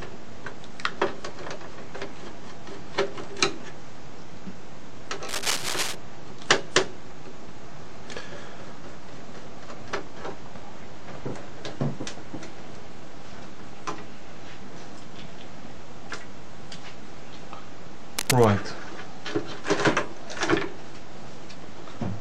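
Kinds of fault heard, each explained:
Cable scratch noise: from 5.29 to 5.95 s and 18.17 to 18.45 s, dense, ragged scratching rides over the sound, first slightly below the signal's level, then roughly equal to it. Likely cause: a worn cable or connector moved, its contact resistance fluctuating rapidly.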